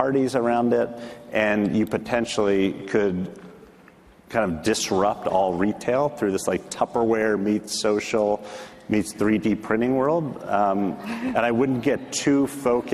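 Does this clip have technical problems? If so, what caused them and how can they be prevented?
No, there are no technical faults to hear in this clip. With nothing having gone wrong, there is no cause to trace and nothing that needs preventing.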